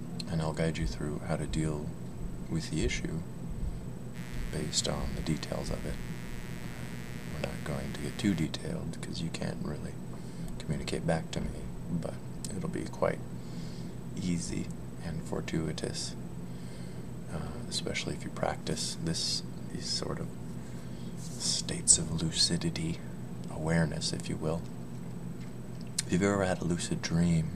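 From 4.13 to 8.47 s, mains buzz appears: switching spikes twice per 60 Hz cycle give a raspy hum, drawn as stacked harmonic lines reaching several kHz, only modestly below the sound.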